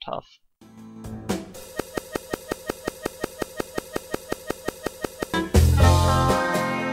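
The sound is fine until 1.8 s, then gets stuck in a broken-record loop: a fragment of about 0.18 s repeats exactly, back to back, 20 times until about 5.34 s, when it moves on. That's the classic sign of a player, encoder or stream stalling and resending the last bit it held, which is likely what happened here. Whatever should have played across those three and a half seconds is lost.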